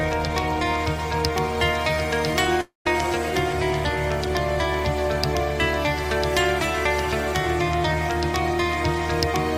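From 2.61 s to 2.87 s the stream most likely suffered a long network dropout: packets stopped arriving and the receiver had nothing real to play. It stretches the last received sound into a buzzy, fading tail, then goes quiet for about 0.14 s before the audio resumes at 2.87 s. About 0.24 s of the original material is never heard, so the audio picks up further along rather than where it broke off.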